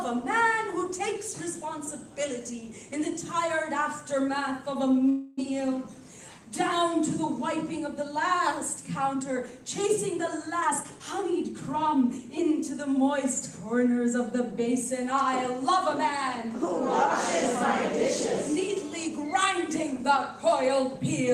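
At 5.09 s the audio stalls for about 0.3 s in a call audio freeze. The last sound is stretched into a fading buzz or hiss for 280 ms, then playback resumes where it stopped, nothing lost but 280 ms later. The likely cause is delayed packets emptying the jitter buffer.

From 10.61 s to 12.19 s a jitter buffer speed-up follows. The receiver trims short pitch-period slices repeatedly to shed roughly 300 ms of built-up delay, so the sound runs at 118% speed with unchanged pitch and comes across as hurried.

Between 16.96 s and 19.08 s a GSM phone buzz appears. A nearby 2G handset in an active call transmits 217 bursts per second, which the audio circuitry rectifies into a hard, raspy 217 Hz tone rich in harmonics, about 20 dB below the signal and nearly steady.

From 19.17 s to 20.61 s the buzz gives way to GSM signalling bursts. With the handset's user silent in the call, it sends only sparse groups of bursts, heard as even ticks with a longer 217 Hz buzz twice a second, roughly 25 dB below the signal.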